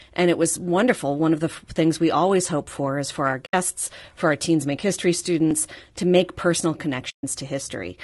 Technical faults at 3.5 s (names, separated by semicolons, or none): low-delay AAC compression; AAC frame loss with muting